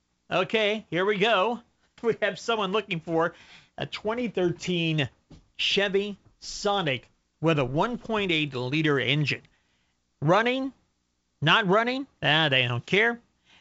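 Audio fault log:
No faults found in this speech: the band stops near 7.7 kHz, consistent with G.722 wideband telephone coding at 64 kbit/s, and any coding damage is faint at most.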